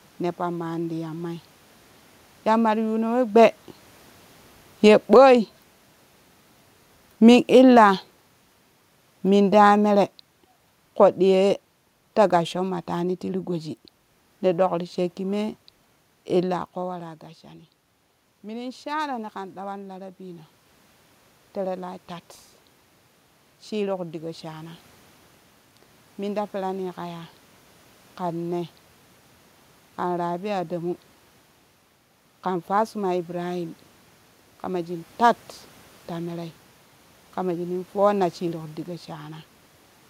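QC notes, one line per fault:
2.47 to 16.6 s, automatic gain falling. The level sinks by about 11 dB over some fourteen seconds. The room noise sinks with it, so the recording itself is being turned down. The control judged the input too loud and kept easing its gain.
5.23 to 5.69 s, automatic gain rising. Inside that long fall, the level swells by about 7 dB in under half a second. Voice and room noise rise together. The control judged the input too quiet and briefly pushed its gain up.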